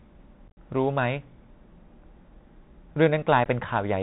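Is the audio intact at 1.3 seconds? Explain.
No. At 1.3 seconds the speech sounds muffled and boxed-in, with scratchy s sounds, a grainy hiss beneath it, and roughness on loud bright moments. This is the Bluetooth CVSD headset codec, present for the whole clip. It sends one bit per sample, only saying up or down, with an adapting step size, which fits a 64 kbps link. Nothing above 4 kHz survives, and fast high-frequency swings outrun the step and distort.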